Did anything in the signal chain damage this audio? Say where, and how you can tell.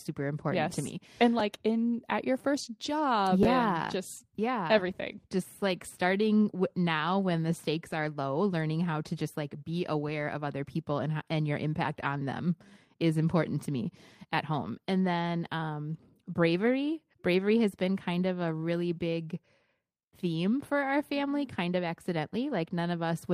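Yes: chunks out of order at the buffer stage. At 1.39 s and 3.43 s, 5.8 ms chunks play late, giving jumbled moments, unlike a dropout, since nothing is missing.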